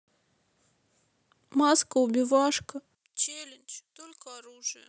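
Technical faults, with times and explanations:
2.95–4.88 s, one channel inverted: the speech drops by about 13 dB, likely because one reversed-polarity channel cancels the shared centre content when summed.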